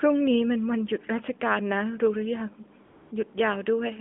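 From 2.86 to 3.12 s, the speech gives way to AMR comfort noise. For about 260 ms, the phone judged the talker silent and sent no speech frames. The receiver filled the gap with steady synthetic noise. The real background vanishes, then snaps back.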